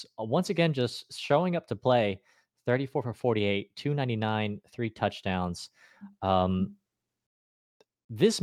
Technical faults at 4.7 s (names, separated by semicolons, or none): none